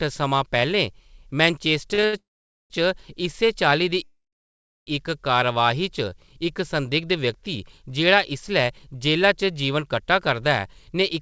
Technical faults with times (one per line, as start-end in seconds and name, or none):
1.94-2.15 short stall from a late packet
2.19-2.72 call audio freeze
4.04-4.89 call audio freeze
5.53-6.34 jitter buffer slow-down
8.79-9.27 jitter buffer speed-up